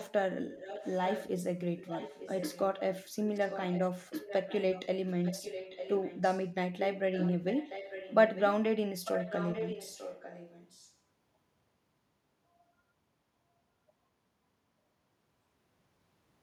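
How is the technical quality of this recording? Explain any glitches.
The recording has a recurring echo leak, heard at 0.47–1.44, 1.77–2.68, 3.34–3.9, 4.21–4.87, 5.06–6.48, 6.84–8.49 and 9.04–10.95 s. The likely cause is a far-end echo canceller failing to remove what its microphone picked up from a loudspeaker, so the speech is returned to the line. A copy of the speech trails the original by about 0.9 s, sitting roughly 10 to 15 dB below it.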